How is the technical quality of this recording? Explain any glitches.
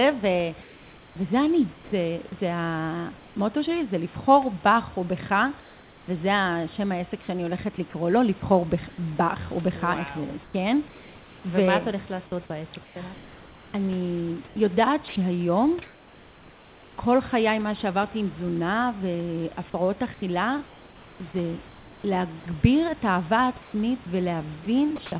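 The recording has two recurring problems, both tied to how silence was handled on a call link. The audio is band-limited with nothing above 4 kHz, which fits a G.711 A-law telephone codec at 64 kbps, and the room noise sits about 25 dB below the speech.

From 0.62 to 3.36 s there is comfort noise in place of the background. For roughly 0.9 s in total, the natural room ambience gives way to a smooth, uniform hiss with none of the texture of the real background. The likely cause is discontinuous transmission: the sender's voice detector judged the stretch to be non-speech and stopped sending audio. The receiver then generated synthetic noise with a roughly matched spectrum, in the style of RFC 3389, until real audio resumed.

Sound chopped by the voice detector appears from 5.6 to 16.98 s and again from 20.14 to 24.98 s. In the first span about 2.68 s of material is replaced; in the second, about 1.14 s. 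The speech comes across as clipped, with soft onsets and trailing edges dropping out. This points to the voice detector repeatedly switching transmission off and on, likely because it misread quiet speech as silence and substituted comfort noise for it.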